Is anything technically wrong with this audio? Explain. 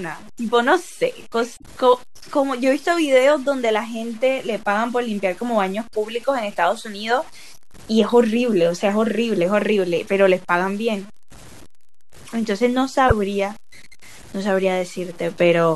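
Yes, there are two problems. Low bit depth without dither runs through the whole clip: the speech carries a grainy distortion that tracks the voice, with error only about 25 dB below the signal. The likely cause is truncation to very few bits, around 7, with no dither, so the rounding error follows the waveform and roughens quiet passages.

Damaged data in a compressed stream appears at 1.53 to 1.64 s and again at 13.08 to 13.12 s. Corrupted frames throw the decoder out of sync while it hunts for the next valid header, producing a brief chirp, squawk, click or short hole.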